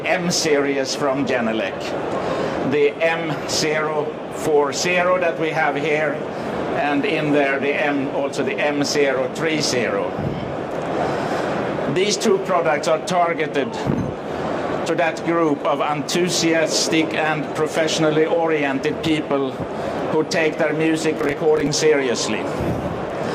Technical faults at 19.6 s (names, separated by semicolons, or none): none